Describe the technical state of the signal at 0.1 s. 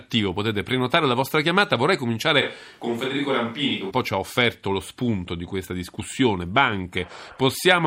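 At 0.1 s the speech signal is intact, with no audible technical fault at that moment.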